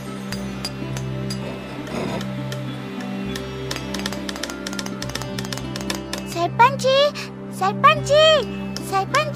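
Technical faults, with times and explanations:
3.71–6.33 s, doubled audio track: a second full-band copy trails about 200 ms behind at roughly equal loudness, likely from a slower second capture path or an out-of-step edit. Unlike echo or reverb, it has no decay or room colour and starts and stops abruptly.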